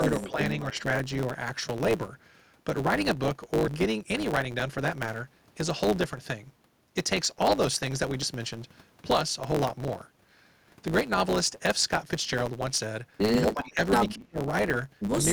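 A block size mismatch (truncated) runs through the whole speech clip. One stage writes longer blocks than the next reads, so each block's tail is discarded. This gives a steady 109 Hz buzz at the block rate and speech running 1.09 times fast at roughly normal pitch.

From 0.03 to 0.39 s the speech dips by about 5 dB. This is speech suppressed in double talk, likely because the echo canceller could not separate the local talker from loudspeaker echo while both sides spoke. Inside that span, from 0.21 to 0.31 s, an echo leak is heard: a faint copy of the speech delayed by 254 ms, about 20 dB down, likely residual loudspeaker pickup that the canceller missed.

The pattern repeats from 0.70 to 0.88 s, with a dip of about 5 dB. A fainter leak at the same 254 ms delay, about 35 dB down, sits between 0.77 and 0.83 s.

Later suppression is deeper. From 13.47 to 13.81 s the speech drops by about 15 dB. 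From 14.15 to 14.41 s it falls by about 35 dB, almost cutting out.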